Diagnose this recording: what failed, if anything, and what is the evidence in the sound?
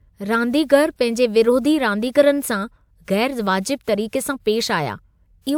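Listening closely to the speech turned up nothing that points to a failure at any stage of the chain.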